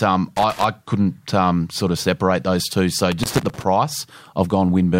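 From 0.36 to 0.67 s, just before "couldn't um sort of", there's loose connector crackle, and it's back from 3.12 to 3.64 s. A dirty or worn contact is making and breaking, chopping the speech into an uneven, scratchy burst of crackle.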